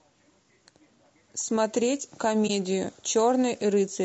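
Speech runs through this clip, and the whole of it carries plainly audible coding damage. The sound is rough and grainy, with noise filling the gaps between the pitch harmonics. This is likely low-delay AAC compression of the AAC-ELD kind used for video calls. Its short frames resolve harmonics poorly and cost extra bits. The damage level points to a low bitrate, around 32 kbps.

There is also AAC frame loss with muting from 2.47 to 2.50 s. The sound fades out and back in, leaving a brief dip about 20 ms long. This fits one lost frame whose spectrum the decoder set to zero. The overlapping windows smear the edges of the gap, so it dips rather than cutting off sharply.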